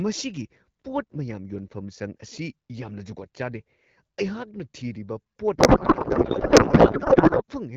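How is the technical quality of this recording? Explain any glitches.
There's one real glitch, near the end. The speech comes through AMR wideband, with the clarity you'd expect from roughly the 12.65 kbit/s mode. From 5.57 to 7.42 s there's a codec payload misread. The sender's octet-aligned AMR frames get parsed as bandwidth-efficient, so every field lands in the wrong place and the speech turns into garbled, warbling noise that barely tracks what's being said.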